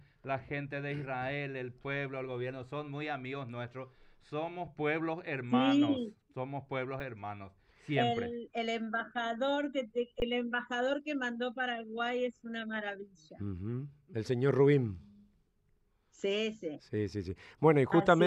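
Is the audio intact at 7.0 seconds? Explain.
No. There is an underrun with held sample at 7.0 s. The output buffer ran empty for 5.4 ms. The converter held its last value, so the waveform sits flat and the sound briefly stops. About 5 ms of audio was lost before it resumes.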